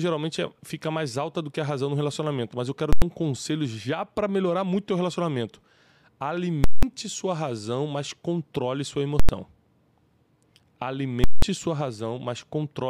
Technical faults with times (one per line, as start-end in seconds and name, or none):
2.93-3.02 invalid numbers at full scale
6.64-6.83 invalid numbers at full scale
9.20-9.29 invalid numbers at full scale
11.24-11.42 invalid numbers at full scale